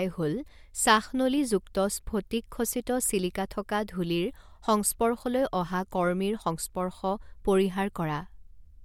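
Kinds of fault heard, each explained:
No fault of any kind can be heard in the recording. The speech carries on without any break, distortion or added noise to point to.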